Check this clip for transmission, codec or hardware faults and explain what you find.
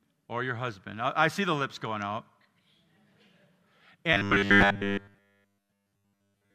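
One fault is present. Robotic sound from repeated short buffers runs from 4.13 s to the end at 6.54 s. The likely cause is new audio arriving too seldom, so playback fills each gap by looping the most recent fragment while fresh speech is dropped. Here the repetition imposes a steady 100 Hz buzz, which fits a loop of about 10 ms, and the whole stretch is made of repeats. The speech becomes a rigid, metallic drone that only loosely tracks the talking.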